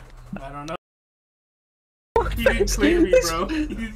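An audio dropout to silence runs from 0.76 s to 2.16 s, cutting the sound off mid-flow and bringing it back just as abruptly about 1.4 s later. The gap is silent, with no room tone or background hiss underneath, so whatever sounded during it is simply gone. That points to the input signal being lost, likely through a disconnected device, a failed link or an accidental mute, while the recorder kept writing silence.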